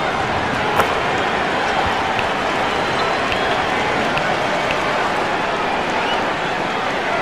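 At 2.92 to 3.00 s, and again at 5.20 to 5.22 s, a corrupt frame is decoded: damaged bits in a few compressed frames, then a couple more, were played anyway, so misread gains and codes put energy at the wrong frequencies. Each event is heard as a short chirpy burst peaking near -15 dBFS. On a spectrogram it shows as a brief, sharp-edged block of misplaced energy; the waveform shows a sudden jagged patch.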